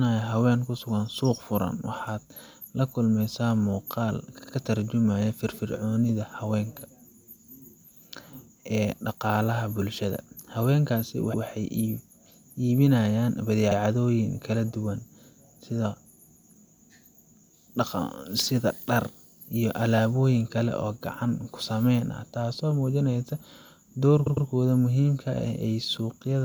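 At 4.38 s, 11.33 s, 13.70 s and 24.26 s the speech stutters with repeated frames. A short block of compressed audio is decoded again, so the same slice plays back-to-back. At 4.38 s a 52 ms block sounds three extra times, at 11.33 s a 104.5 ms block once more, at 13.70 s a 52 ms block once more, and at 24.26 s a 104.5 ms block twice more. The block lengths fit whole codec frames, and each repeat lengthens the audio rather than leaving a gap as a dropout would.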